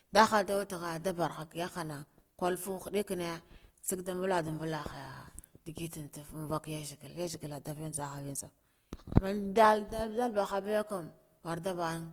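Throughout the speech there is a rough, grainy texture with little swirling, while the top end stays open to about 20.2 kHz. This is likely Opus compression near 24 kbps in music mode: starved bands get filled with noise-like content rather than left as MP3-style holes.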